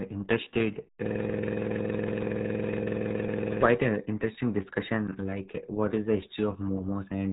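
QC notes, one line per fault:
throughout, RealAudio 14.4 codec: the speech is band-limited with nothing passing above 3.8 kHz, so consonants lose their edge and the sound turns muffled. Heavy coding damage adds a gargly, bubbling texture as the low-rate speech model rebuilds each stretch from a coarse description rather than the waveform itself. The sound points to RealAudio 1 at a rate around 8 kbit/s, squeezed for a dial-up modem link.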